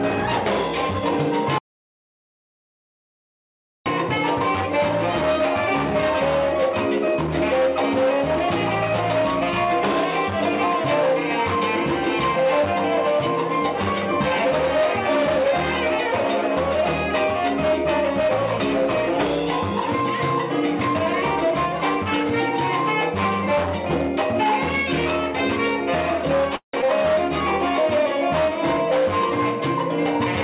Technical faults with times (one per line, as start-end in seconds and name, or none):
1.58-3.86 audio dropout to silence
26.56-26.76 call audio freeze
26.81-26.85 skip ahead